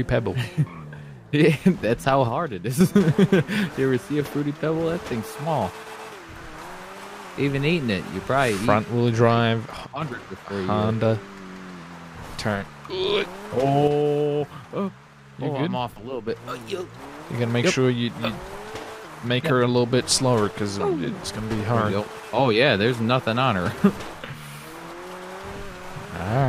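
At 2.28 to 2.81 s, 9.85 to 10.02 s and 13.88 to 16.28 s the level falls abruptly by about 6 dB and then snaps back. This is likely one channel dropping out, with the mono sum losing half its shared content.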